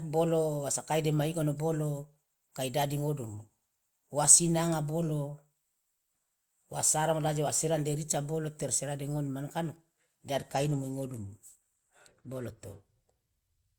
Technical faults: Bluetooth SBC bit pool drop

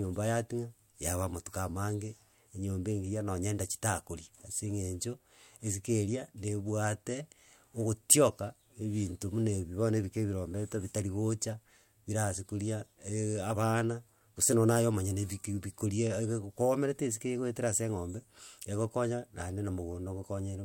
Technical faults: none

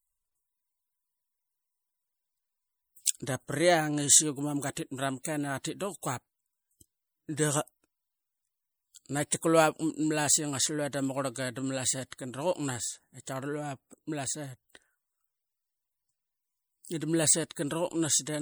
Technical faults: MP3 compression

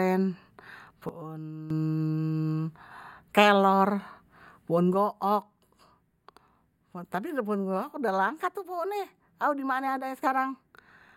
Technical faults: sudden gain jump

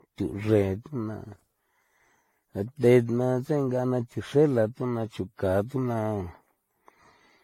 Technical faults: generation loss

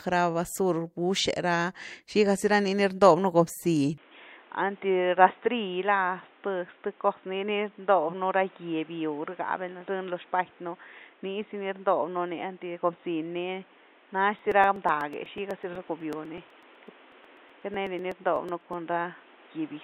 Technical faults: input switched to a poorer device; periodic USB or driver dropouts

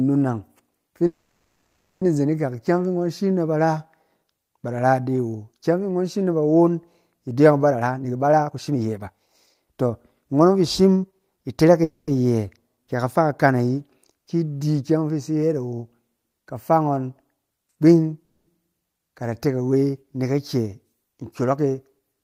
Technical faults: call audio freeze; jitter buffer speed-up

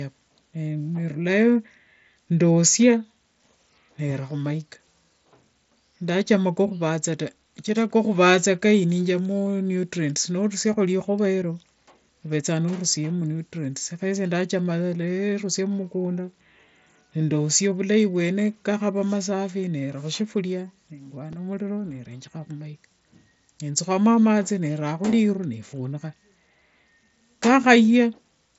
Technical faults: repeated buffer

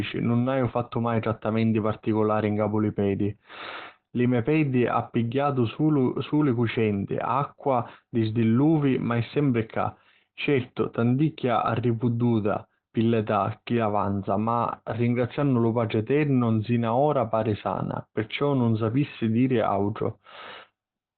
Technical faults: Opus compression

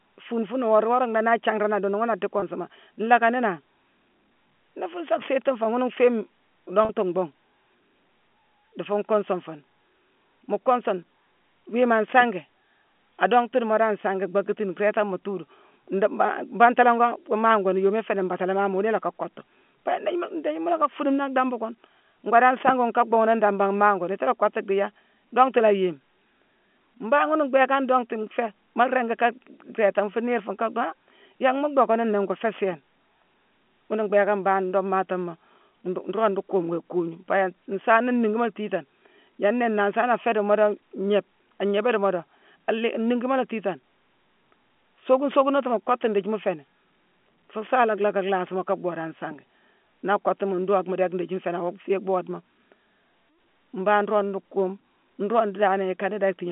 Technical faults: packet loss with pitch repetition

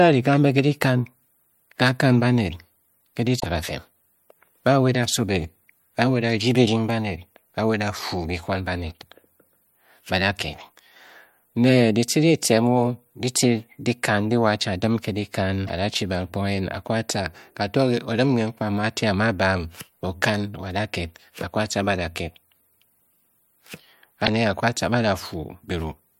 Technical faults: damaged data in a compressed stream

